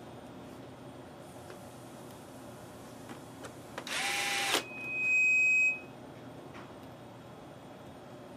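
From 4.31 to 5.96 s, a 2.5 kHz loudspeaker feedback squeal builds over about a second as the loop runs away; a fixed tone wouldn't swell.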